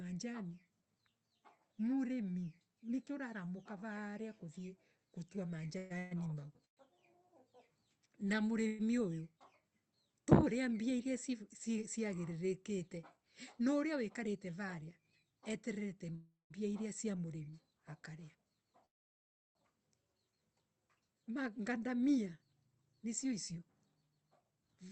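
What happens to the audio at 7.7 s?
Nothing goes wrong at 7.7 s: the speech comes through intact, with only the steady band-limited character of the Opus call path, which tops out around 8 kHz.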